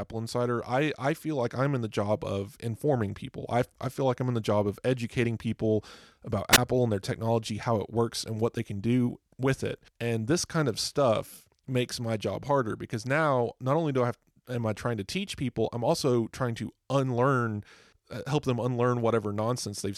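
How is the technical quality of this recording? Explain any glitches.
The recording has one glitch, a wireless microphone squelch dropout between 6.52 and 6.58 s, right after "of educating people about" and before "and their technology how". The radio link from the analogue FM microphone weakened enough for the receiver's squelch to cut the output. You hear a short burst of hiss, then a gap of near silence lasting about 15 ms, before the speech comes back.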